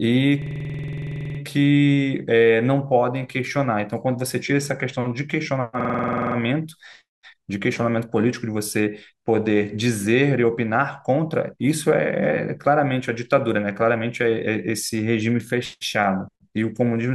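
System hang loop at 0.42–1.39 s and 5.81–6.36 s: the system froze while the hardware replayed one 46 ms slice, fitting a 2048-sample buffer, as a 21.5 Hz machine-gun stutter.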